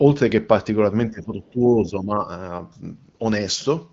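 From 1.1 to 2.29 s the speech sinks in and out, falling by roughly 15 dB at its deepest, with about a second of the stretch affected. The likely cause is speech suppressed in double talk: an echo canceller, hearing both sides at once, mistook this talker for loudspeaker echo and pulled the level down. On a waveform the envelope shows ragged notches. A spectrogram shows the energy thinning and breaking into patches across that span.

From 2.73 s to the end at about 4 s, the sound turns thin, bright and hissy, because pre-emphasis was left on. A treble boost on the FM 75 µs curve was applied without the matching de-emphasis, a curve that lifts 10 kHz about 13 dB above the 1 kHz level. On a spectrogram the upper bands glow noticeably hotter relative to the lows, and sibilants stand out as bright vertical streaks. The AMR-WB wideband band limit still cuts everything off cleanly near 7.4 kHz.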